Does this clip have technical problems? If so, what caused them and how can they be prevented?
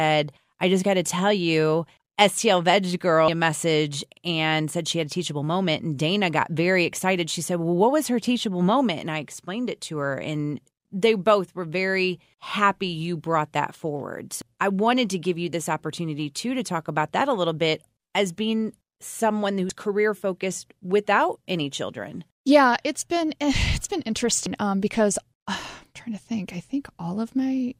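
Yes. Damaged data in a compressed stream at 3.28 s (before "a message and said"), 14.42 s, 19.70 s (between "bit as being someone" and "career focused without any") and 24.46 s (between "it's been" and "um because uh"): corrupted bytes make the decoder misread frames, lose sync and hunt for the next frame header. Prevent it by transferring and storing files with checksums or error-checked transport, and by re-fetching any stream that fails verification.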